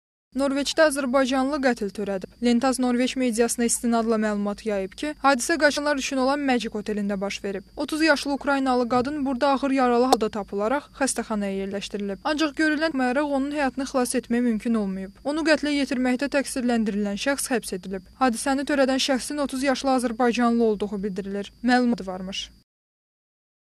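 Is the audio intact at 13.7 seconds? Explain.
Yes, at 13.7 seconds the audio plays through intact, with no fault audible at that moment.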